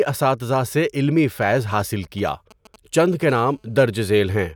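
GSM signalling bursts run from 1.57 to 3.23 s, right after "اساتذہ سے علمی": a nearby 2G phone is signalling, and the audio circuit rectifies its radio pulses into a galloping dit-dit-dit of short 217 Hz buzzes, roughly 25 dB below the speech.

GSM phone buzz follows from 3.29 to 4.51 s, as the phone settles into a call and transmits continuously at 217 bursts per second. The rectified pulses form a steady, raspy 217 Hz buzz rich in harmonics, about 35 dB below the speech.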